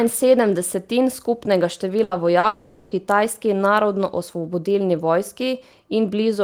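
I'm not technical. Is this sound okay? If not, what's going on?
No, there are three glitches bunched together just after the two-second mark.

Right after "sedem desetin skupnega", from 2.03 to 2.14 s, there's a burst of packet loss. A run of network packets went missing, so the call app stretched the last sound into a fading buzz or hiss for about 80 ms, and then the speech picks up a little further on with that bit gone.

At 2.39 to 2.46 s comes a short concealed packet loss. About 40 ms never arrived in time, and the app patched it by continuing the previous sound. You hear it as a quick smear or wobble, and a small piece of speech disappears.

Almost immediately after, from 2.47 to 2.94 s, the speech is replaced by a drawn-out buzz or hiss that slowly fades, lasting nearly half a second without ever going fully quiet. The likely cause is a long network dropout. The app kept filling in sound, and when the speech returns, everything in that stretch is gone.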